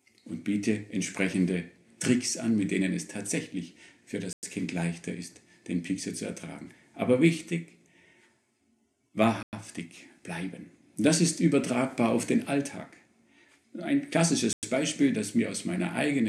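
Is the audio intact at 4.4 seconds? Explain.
No, 4.4 seconds falls right inside a gap between chunks, a hole of silence running from about 4.33 to 4.43 s, so roughly 100 ms. It sounds like the audio was delivered in 5-second pieces, and silence was left at this join instead of the next piece picking up seamlessly. Nothing is actually lost; the sound is just interrupted by a short hole at the join.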